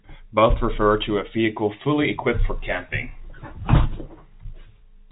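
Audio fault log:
No faults heard in this speech.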